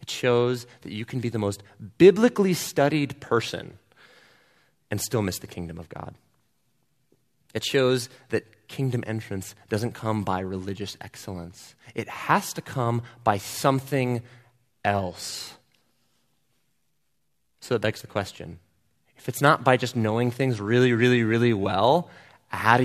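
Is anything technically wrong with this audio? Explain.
No, nothing technically wrong can be heard here.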